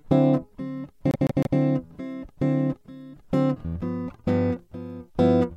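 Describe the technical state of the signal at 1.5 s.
At 1.5 s the music is inside a repeated frames fault running from 1.11 to 1.58 s. A 157 ms block, which fits about six compressed frames, plays three extra times, so the passage stutters and the audio runs 470 ms longer.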